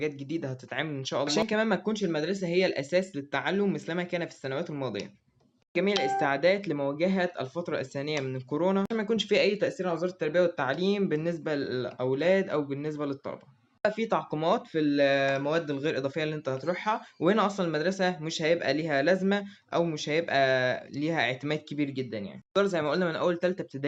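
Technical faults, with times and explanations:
No technical faults can be heard anywhere in the audio, and the signal stays steady and intact throughout.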